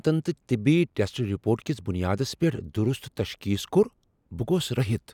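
Nothing in this bit of speech raises a flag, since there's no technical fault to point to anywhere in it.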